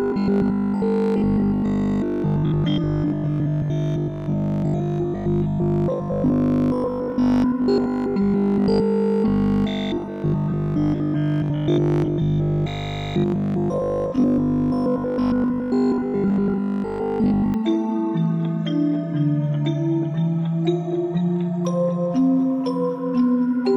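From 0.02 to 17.54 s, robotic sound from repeated short buffers: a rigid 50 Hz metallic buzz replaces most of the audio, likely from 20 ms chunks replayed. Unlike steady hum, it tracks the sound.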